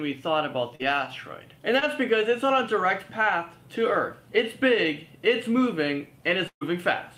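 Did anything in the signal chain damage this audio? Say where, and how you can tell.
Yes. At 0.75 to 0.81 s and again at 1.79 to 1.83 s the sound briefly smears and wobbles, as if it stutters on what came just before. That is short concealed packet loss on the network path. About 40 ms and then 20 ms of audio failed to arrive in time. Each time the receiver filled the hole by extending the preceding sound before blending back into the real signal.

From 6.47 to 6.63 s there is a longer held-over stretch that fades out and goes silent for about 80 ms, after which the audio picks up further along. This is a burst of packet loss, again in the network stage, with roughly 140 ms of audio missing. The receiver kept synthesising the last sound for about 135 ms and turned it down as the gap went on, so the end of the concealment dies away to silence before real packets resume.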